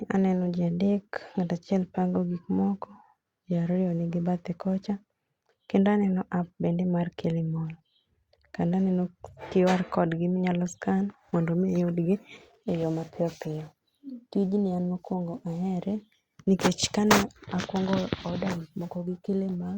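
Nothing in the speech stood out as a technical fault on listening.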